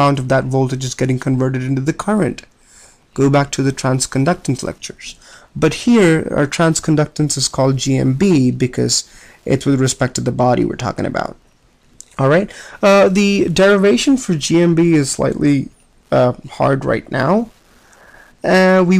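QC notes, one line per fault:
throughout, Wi-Fi interference: a Wi-Fi radio near the audio circuitry is radiating beacon transmissions that the circuit rectifies into the signal path, leaving a faint, steady tick every 102.4 ms, almost ten per second, sitting roughly 45 dB below the sound.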